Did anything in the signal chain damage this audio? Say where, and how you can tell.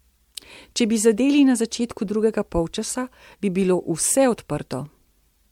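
Yes, at the codec stage. The speech sounds swirly, smeared and hollow throughout, and attacks blur. That is worse than one MP3 pass near 96 kbit/s would explain. Generation loss is the likely cause. A few re-encodes, each on a shifted frame grid, stack up noise and spectral holes.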